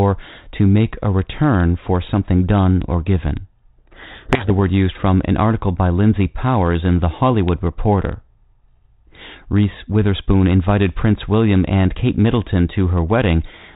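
From 3.78 to 4.51 s, a codec payload misread reads each G.726 code word's bits in the wrong order. Speech is buried in harsh distortion that switches on and off abruptly, unlike steady low-bitrate rasp.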